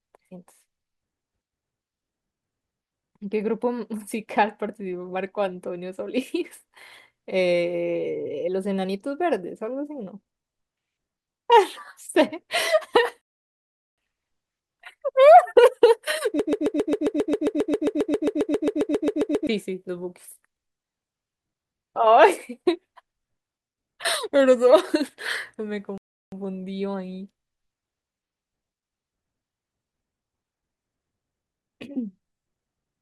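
At 13.21 s the player ran out of downloaded audio, a rebuffering stall: the speech drops to silence until 13.98 s, then picks up exactly where it stopped, adding 0.76 s with nothing lost. From 16.40 s to 19.47 s the stream likely stalled and kept resending its last fragment, a broken-record loop: a 134 ms piece repeats back to back 23 times, and the speech due in that span never plays. A second rebuffering stall at 25.98 s falls silent until 26.32 s, adding 0.35 s before the speech resumes seamlessly.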